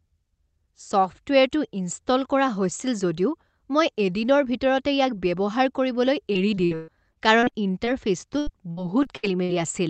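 After "ভিতৰতে ইয়াক ব্যৱহাৰ কৰিবলৈ", repeated packet loss runs from 6.33 to 7.89 s and again from 8.39 to 9.51 s. Lost packets get patched by stretching the last sound, making choppy, robotic speech with gaps up to 131 ms.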